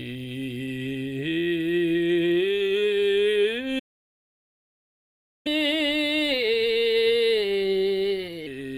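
At 3.79 s the music cuts to silence for about 1.66 s, then resumes at 5.47 s. That points to a playback stall, likely the player running dry. From 5.47 to 8.47 s, catch-up at higher speed plays the backlog 1.15 times fast. Tempo and pitch rise together by about two semitones, unlike a steady pitch error.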